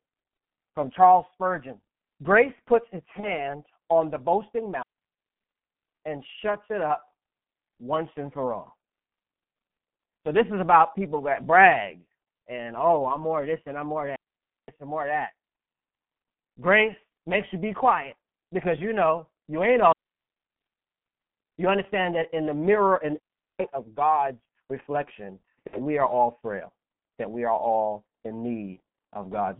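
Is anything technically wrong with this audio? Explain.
Yes. The speech runs through a G.723.1 codec at 6.3 kbit/s, band-limited to 150 Hz to 3.4 kHz. Its coarse 30 ms frames leave it muffled and hoarse, and a spectrogram shows nothing above 3.4 kHz.

VoIP packet loss concealed by the speech codec occurs at 3.20–3.50 s, 25.67–25.77 s and 28.74–28.78 s. Each gap fits one or two lost 30 ms frames. The decoder repeats its last pitch and filter, producing a fading buzzy tone or coloured noise.

A digital wireless dropout occurs at 4.83–5.64 s, 14.16–14.68 s, 19.92–21.22 s and 23.20–23.60 s. The receiver mutes cleanly for 0.4 to 1.3 s, leaving flat-line gaps in the waveform and blank columns in the spectrogram, with no noise bursts at either edge.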